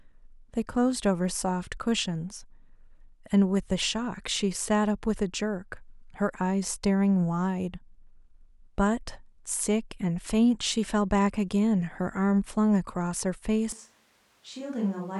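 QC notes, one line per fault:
13.72 s to the end, switch to a distant microphone: the speech suddenly goes roomy and hollow, thins out in the low end, and drops roughly 10 dB, with room noise now sitting maybe 35 dB under the speech. The close mic's feed has likely dropped out and we're hearing a mic much further away, so there's more room reflection and ambience and less direct sound. It never switches back, so the last second and a half stays like this.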